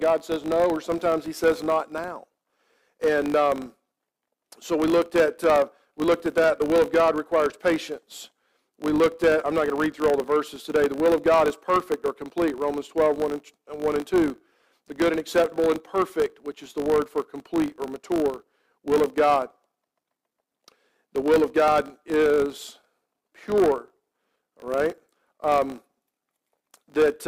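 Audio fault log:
Throughout: filter restarted on every block. A steady 50 Hz buzz sits under the audio, made of small clicks repeating every 20 ms. Each one marks the start of a processing block, where the filter has dropped its stored state and begins again from silence, so its output jumps briefly before settling. Because the size of each jump depends on the signal at that moment, the buzz grows and fades with the level of the sound.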